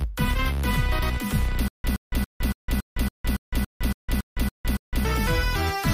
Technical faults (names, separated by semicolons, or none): stutter with silent gaps